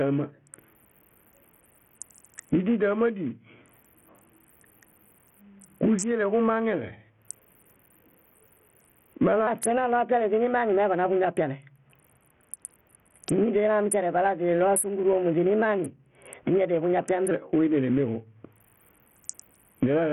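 Gain pumping runs through the whole speech clip, likely from input gain set far too high and a fast limiter clamping it: the background swells by around 25 dB in gaps, then ducks under each loud syllable. Bluetooth SBC compression, likely at a low bitrate near 48 kbps, starves the upper bands throughout, so the treble flickers, gritty noise rides along, and nothing sounds above 16.8 kHz. From 9.47 to 17.31 s a section at the wrong speed plays 1.19 times too fast, likely from a clock mismatch, pushing pitch up about three semitones and rushing the speech.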